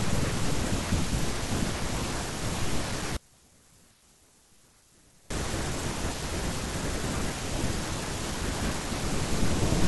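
From 3.17 s to 5.30 s the speech collapses by about 28 dB, leaving only a faint trace of the voice before normal level returns. The likely cause is one channel inverted: with one stereo side in reversed polarity, the centred speech common to both channels cancels when the pair is summed to mono, so only the small difference between left and right survives for those two seconds.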